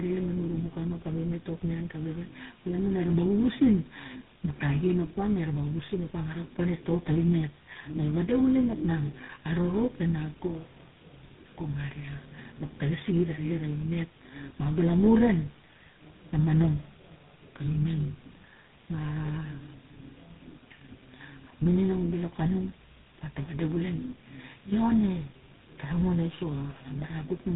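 Speech, degraded throughout by tandem speech coding: the sound is rough, muffled and warbly, with nothing above 3.8 kHz. It has passed through three speech codecs in a row, GSM full rate, then 24 kbit/s G.726, then GSM full rate again, each recoding the previous one's damage.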